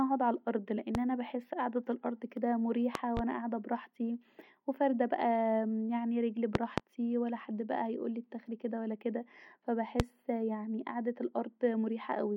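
Speech clip with loud pops at 0.95–0.99 s, 2.95–3.21 s (a double pop), 6.55–6.82 s (double) and 10.00–10.04 s, peaking roughly 20 to 25 dB above the speech. Speech continues underneath. Likely voltage pulses from a plug, switch or static discharge.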